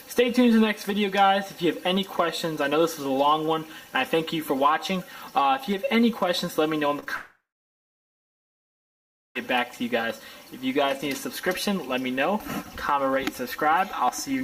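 Right around 6.99 to 7.04 s and again 7.04 to 7.08 s there's short concealed packet loss, where roughly 20 ms chunks went missing and the decoder smeared the last sound across each gap. Then from 7.16 to 9.37 s the audio trails off into a fading buzz or hiss and then about 1.9 s of silence before picking up past the lost stretch, likely a long network dropout.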